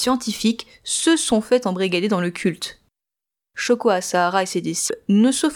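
Speech clip with a broken MP3 bit reservoir from 4.87 to 4.90 s: after a likely frame cut, one 26 ms frame decodes as garbage and the audio skips ahead, unlike a clean dropout.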